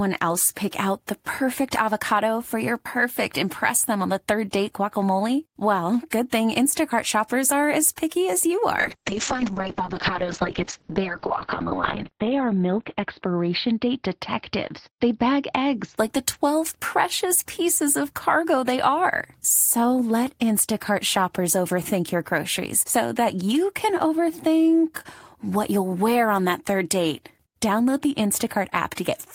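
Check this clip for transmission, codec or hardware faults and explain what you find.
One transmission fault appears: a call bitrate drop between 8.79 s and 16.03 s. The connection's bandwidth estimate collapsed and the encoder was forced to spend far fewer bits, a fall that fits roughly 32 kbps down to about 9 kbps. It coded the speech more coarsely and narrowed the band from 20 kHz to 4 kHz. The speech turns muffled and rough, at its worst for about 3 s, before the treble and clarity return.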